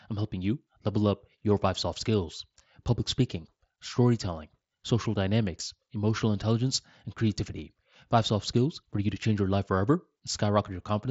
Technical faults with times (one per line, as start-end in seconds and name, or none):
none